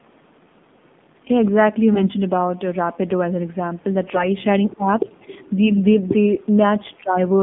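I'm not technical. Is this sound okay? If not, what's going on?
No, not quite. The whole clip has been through the AMR narrowband mobile codec, the old phone-call squeeze, so the voice sounds muffled, boxy and plainly buzzy, with no crispness at all.

There are AMR bit errors at about 1.93 to 2.07 s, 4.02 to 4.27 s and 5.70 to 5.79 s. Scrambled data makes the voice go briefly hoarse, scratchy and gargly.

Around 4.71 to 4.76 s you can faintly hear the other side's voice leaking through, likely because the echo canceller didn't fully remove the far end's loudspeaker sound.

Right after, from 4.76 to 5.06 s, the speech is suppressed in double talk. The voice dips noticeably, likely while both sides overlap.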